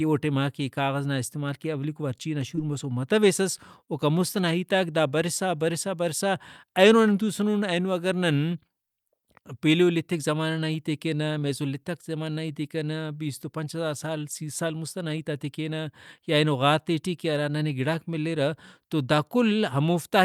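Short concealed packet loss strikes three times in this speech. About 20 ms of audio failed to arrive in time at 2.55 to 2.59 s, just after "استعمال کہ اولیکو وارچینا"; at 3.85 to 3.89 s, just before "اوکان مست ئنا ہیتاک"; and at 11.39 to 11.43 s, between "زمانہ نا ہیتے کینہ" and "لیتک زمانہ نا ہیتے". Each time the receiver extended the preceding sound across the gap and crossfaded back, leaving a brief smear or wobble in the speech.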